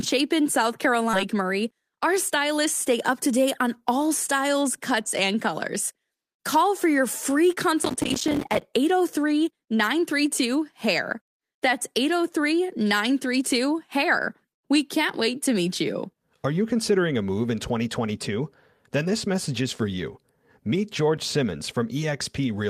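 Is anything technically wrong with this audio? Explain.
Yes, the speech has three faults.

At 1.13 s there is a skip ahead. About a second of audio never plays, and the material on either side is spliced with no filler. A backlog of queued audio was discarded, either lost in transit or dropped when the jitter buffer overflowed, so playback jumps straight to later content. The result is an abrupt cut where the speech lurches forward mid-flow.

From 1.25 to 2.66 s, just before "stay up to date", the jitter buffer speed-up follows. The receiver was holding more delay than its target, so it repeatedly trimmed pitch-period-sized slices, around 70 ms in total, to catch up. Speech runs at about 104% of normal rate with pitch unchanged. The shift is small, just under the point where speech starts to sound hurried.

From 7.83 to 8.62 s, right after "for your free", there is processor overload crackle. 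The audio thread repeatedly missed its deadlines, dozens of times in a row. Each miss inserted a short hard-edged silence, with spacing that fits buffers of roughly 5 ms. The rapid train of dropouts is heard as a gritty, tearing crackle over the speech that stops once the load clears.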